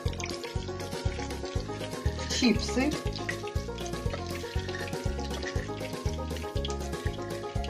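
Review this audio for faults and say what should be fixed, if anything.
From 0.0 to 2.0 s the adaptive stream starts at a low bitrate: nothing above 14.1 kHz and stronger codec artefacts, fitting roughly 32 kbit/s AAC, then a gapless jump to fuller quality. Start playback on a higher-bitrate rendition, or use a measured-throughput estimate before the first segment.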